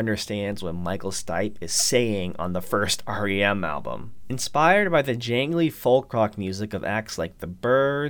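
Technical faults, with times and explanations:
0.52–4.99 s, DC step: the waveform's zero line jumps by about -33 dBFS, holds, then drops back before "the jangly folk rock". Each sudden shift thumps.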